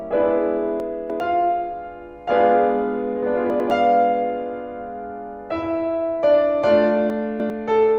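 At 0.8 to 1.2 s the music jumps about. This is chunks out of order. A 100 ms block of audio plays three blocks late, after the material meant to follow it. Nothing is missing, but the sequence is scrambled, with three hard joins. At 3.5 to 3.7 s two adjacent blocks swap, giving a brief stutter. At 7.1 to 7.5 s the first pattern repeats, with a block three places late.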